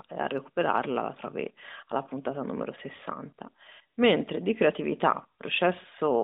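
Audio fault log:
No faults turn up here; it's just speech coming down a narrowband mobile line through the AMR codec the way that path normally does.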